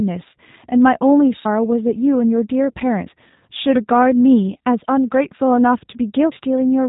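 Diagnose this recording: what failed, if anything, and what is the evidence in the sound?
Throughout, the speech sounds thin, rough and faintly synthetic, with nothing above 3.8 kHz. At the codec stage, this is the G.729 codec: the sound is rebuilt from a vocal-tract model and a few pulses per frame, which fits an 8 kbit/s stream and plainly roughens the voice.

At 3.07 s and 6.32 s there is an abrupt jump forward in the speech and no gap of silence, losing roughly a tenth and a third of a second. The likely cause is a dropped buffer (overrun) at the driver stage, where unread samples were overwritten and the two sides spliced together.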